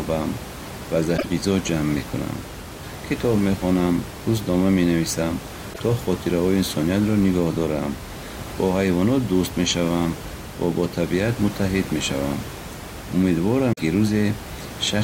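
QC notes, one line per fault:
1.14–1.25 s, 5.70–5.81 s and 13.72–13.81 s: damaged data in the compressed stream. Each is a short glitch of roughly 0.1 s breaking into the speech. Corrupted bytes made the decoder misread the frames there. It lost sync, then skipped ahead to the next valid frame header.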